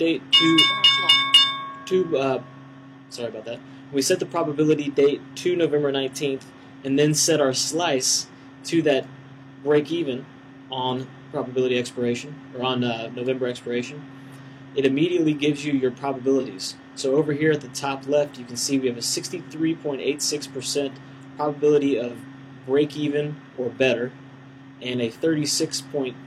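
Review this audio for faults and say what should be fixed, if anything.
Two brief AAC frame loss with concealment glitches show up, at 16.39 to 16.46 s and again at 22.07 to 22.13 s. Each gap runs about 43 ms, which fits a single dropped AAC frame, and the decoder patches it from the last good spectrum, so you get a short smeared, noisy or phasey blip. Worth fixing upstream: add forward error correction or retransmission on the transport so frames aren't lost in the first place.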